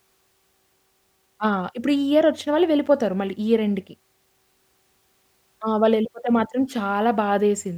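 No technical faults can be heard anywhere in the recording.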